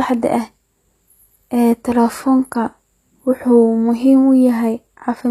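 Speech, carrying what sounds like HE-AAC compression throughout: the treble stays bright, but s sounds come out gritty and metallic because the upper band is likely rebuilt by spectral band replication rather than coded directly, which fits a low bitrate of roughly 24 kbps. On a spectrogram the upper region looks like a smeared, blocky copy of the lower harmonics that doesn't line up across the crossover, and everything stops abruptly at about 14.9 kHz.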